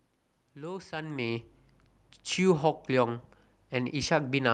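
No technical faults are audible.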